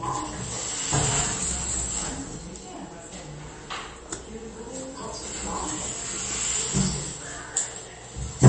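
Everyday sound with MP3 compression throughout: nothing survives above 8.3 kHz, and the remaining detail swirls and chirps as weak components flicker between frames. That flickering, not just the dull top, separates it from a plain low-pass filter, and the plainly audible damage likely fits a bitrate around 32 kbps.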